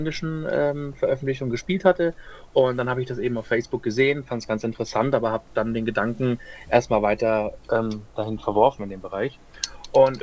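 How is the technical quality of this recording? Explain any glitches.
No glitches to report: the band-limiting heard here, with nothing above 8 kHz, is what a wideband call path leaves behind, consistent with G.722 at 64 kbps.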